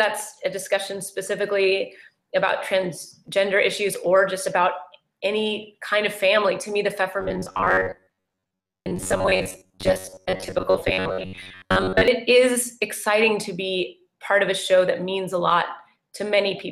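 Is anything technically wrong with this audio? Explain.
Yes. From 7.21 to 12.08 s there's robotic sound: a metallic 93.8 Hz buzz, likely from roughly 11 ms buffers being repeated about half the time while real audio gets skipped.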